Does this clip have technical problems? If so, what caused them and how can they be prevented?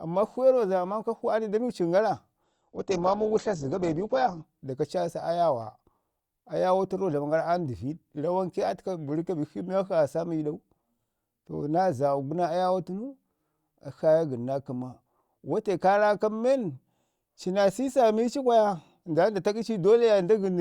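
Yes. From 2.44 s to 4.44 s the speech abruptly loses its treble and takes on a thinner quality, with nothing above 8.1 kHz, then snaps back to full bandwidth with no gap either way. This is an adaptive stream at a lower bitrate: the player briefly switched to a much more heavily compressed rendition, which fits a drop from around 64 to 12 kbit/s Opus. Raising the player's minimum bitrate or buffering further ahead would prevent the switch.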